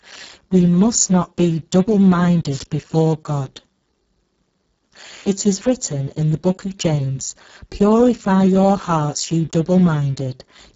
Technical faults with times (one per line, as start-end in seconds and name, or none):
0.00-10.76 Speex codec
2.50-2.66 wireless microphone noise hit